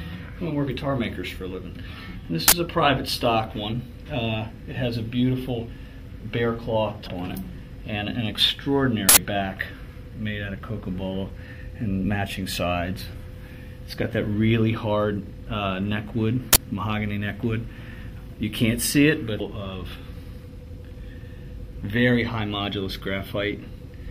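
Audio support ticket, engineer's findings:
Uninitialised buffer. Short, loud bursts of digital noise at 2.48 to 2.52 s, 9.09 to 9.17 s and 16.53 to 16.57 s. Lengths of 40, 80 and 40 ms point to whole playback blocks, the 80 ms event one longer block. Cause: blocks sent to output before any audio was written, so stale memory was played as samples. Versus stream damage: loud, block-length and unrelated to the audio around it.

Damaged data in a compressed stream. Brief chirp or blip at 7.06 to 7.08 s and another at 19.39 s, each about 20 ms or less. Probable component: the decoder hitting corrupt or missing bytes, misreading frames, then resyncing on the next frame header. Versus buffer fault: shorter, a decoder-style squawk rather than a loud block of noise, and not matched to playback block size.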